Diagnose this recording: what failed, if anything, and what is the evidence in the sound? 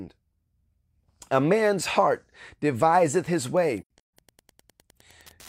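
Wi-Fi interference enters at the analogue wiring stage from 2.86 s, right after "man's heart", and runs to the end. A steady tick repeats every 102.4 ms, about ten per second, at roughly 35 dB below the signal. This is a nearby radio's beacon being rectified by the audio circuit.

AAC frame loss with muting sits in the codec path, from 3.81 to 4.13 s. About 256 ms of sound drops out in holes spread over 341 ms, the longest around 150 ms, which suggests roughly six lost frames. The decoder zeroed each missing frame's spectrum, and the overlapping windows fade the sound out and back in at each gap.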